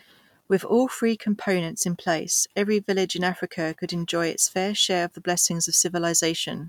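Nothing stood out as a technical fault on listening to the recording.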